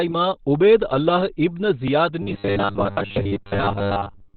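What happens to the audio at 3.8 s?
At 3.8 s the speech has a robotic sound from repeated short buffers. It starts at 2.22 s and runs to the end of the clip. The voice becomes a rigid, metallic buzz at 100 Hz. That pitch fits a chunk of about 10 ms being replayed over and over while new audio arrives too late. Most of the real audio in this stretch is skipped, so the words are only loosely followed. This is likely a playback buffer running dry.

The same moment also carries heavy Opus compression, present across the whole clip. Nothing is heard above 4.5 kHz. The sound is narrowband, muffled and hoarse. That points to Opus in its SILK speech mode at a low bitrate, around 12 kbps. At such a low rate the encoder keeps only a narrow band and coarse detail, so the speech loses its brightness and turns rough.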